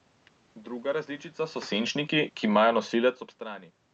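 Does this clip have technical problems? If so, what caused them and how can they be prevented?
Yes. After "različica so", from 1.71 to 3.28 s, there is automatic gain falling. The speech and its background sink together by about 4 dB. The gain control judged the input too loud or its background noise too strong. To prevent it, set a lower input level or turn off automatic gain control.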